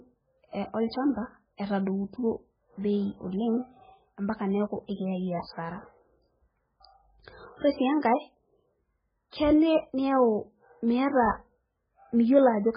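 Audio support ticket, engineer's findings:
Speech watery and swirly throughout, sibilants metallic and chirpy, consonant attacks smeared; nothing above 5 kHz. Likely MP3 compression at a very low bitrate, near 9 kbps: encoder truncating treble at fixed cutoff, weak frequency lines dropping in and out frame to frame.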